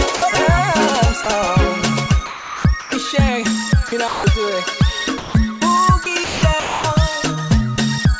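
At 0.16 to 0.22 s and again at 1.24 to 1.26 s, the sound briefly gives way to flat, steady noise. This is sound dropped by the voice detector: the sender likely judged the material to be background, stopped transmitting, and the receiver filled the gap with comfort noise.

From 2.26 to 2.92 s, 3.88 to 4.24 s and 6.04 to 6.84 s, the audio turns choppy. This is sound chopped by the voice detector, which likely switched transmission off and on repeatedly within each stretch and left comfort noise in the gaps.

A longer dropout at 5.18 to 5.34 s swaps about 130 ms of sound for noise. A final one at 8.20 s is only a few milliseconds.

The G.722 call path shows up as the usual coding noise and the absence of anything above 8 kHz.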